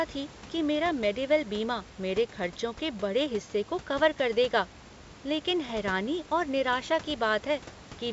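No technical faults are audible in this recording.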